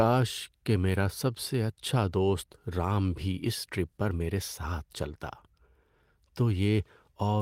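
At 0.93 to 0.95 s, about 20 ms is a lost packet rebuilt from error correction: a single missing packet, judging by the length, was replaced by the low-bitrate copy carried in the next one. Unlike concealment, the speech itself is not guessed or smeared, just briefly grainier, noisier audio.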